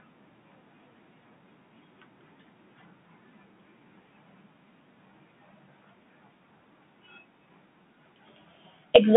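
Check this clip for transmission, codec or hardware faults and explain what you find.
The speech passes through a Bluetooth CVSD headset codec from start to finish. The band runs from about 150 Hz to 3.5 kHz, and the codec damage is plainly audible. CVSD sends a single up-or-down bit per sample and adapts its step size, which fits a 64 kbps link. When the waveform moves quickly the step cannot keep pace, so s sounds come out scratchy and a granular hiss sits under the speech. On a spectrogram, energy stops sharply at 3.5 kHz and a noise floor fills the band. On the waveform, steep edges look sloped and stepped.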